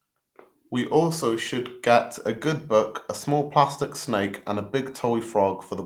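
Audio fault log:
Nothing stood out on listening to this speech clip.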